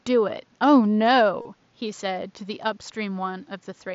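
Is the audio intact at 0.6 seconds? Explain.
Yes, the audio is intact at 0.6 seconds, with nothing there beyond the quiet room noise sitting well below the speech and the ordinary band limit of the Bluetooth mSBC headset link.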